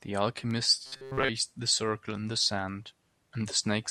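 A speech clip in which, from 0.86 to 1.30 s, the voice turns into a rigid metallic buzz near 133 Hz: robotic sound from repeated short buffers, likely from a roughly 7.5 ms chunk looping over most of that stretch.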